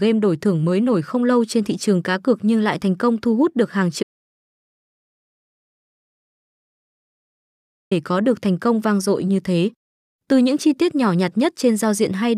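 At 4.03 s, just after "thu hút được hàng", the speech cuts to dead digital silence, with no room tone at all, and returns mid-flow at 7.91 s with "có được thành công". This audio dropout to silence likely came from the input briefly disconnecting while silence was recorded, losing about 3.9 s.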